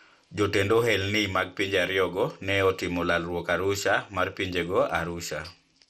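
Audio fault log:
Throughout: MP2 compression, most likely at a low rate. The speech sounds dull and carries a gurgling, granular roughness, and nothing is present above about 15.1 kHz. The coder divides the signal into 32 equal-width bands and shares a small bit budget among them, so upper bands drop out and flicker in and out while the remaining bands are coarsely quantised. The degree of damage fits a rate of around 64 kbps.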